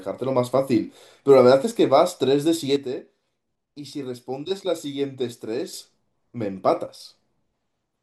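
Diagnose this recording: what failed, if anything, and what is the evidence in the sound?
Speech and background noise drop together by about 7 dB at 2.76 s and recover at 5.73 s, then drop by about 5 dB from 6.86 to 7.0 s. That's a sudden gain jump, likely a digital gain setting in the processing stage switched without a ramp.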